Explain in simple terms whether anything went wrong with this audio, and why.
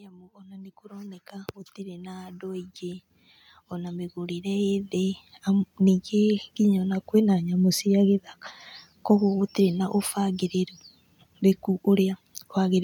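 Automatic gain rising, from 0.05 to 5.76 seconds: the recorder judged the input too quiet and steadily turned itself up, so the speech and background swell louder together.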